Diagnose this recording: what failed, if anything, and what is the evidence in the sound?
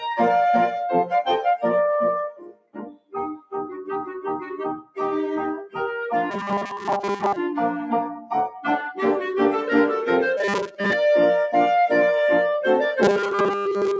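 Noise suppressor applied to music or sounds, throughout the clip. This is a call-processing stage. A speech-oriented suppressor stays active and keeps treating sustained, steady content as noise. The level therefore swings by a few dB as held portions and decays are pulled down while onsets pass. The sound pumps and thins rather than sitting steady. The band tops out near 8 kHz, as expected from the call's microphone path.

Sound cut by the noise suppressor, at 2.30–3.14 s, 3.37–3.53 s and 4.81–4.97 s. In these stretches the same call-processing suppressor judged the material to be noise and clamped it well below the surrounding level. The cut reached about 21 dB in the first and longest span, and about 16 dB and 15 dB in the two brief ones. Sustained and fading parts sink or have their tails chopped, while sharp attacks mostly survive.

Robotic sound from repeated short buffers, at 6.30–7.36 s, 10.37–10.93 s and 13.02 s to the end. 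The sound turns into a hard, metallic buzz locked at 200 Hz, and most of the real audio in those spans is missing. The stage is likely the driver or buffer layer. Audio arrived too slowly, so a 5 ms fragment was looped to fill the gaps. That fixed repeat period is what imposes the 200 Hz pitch.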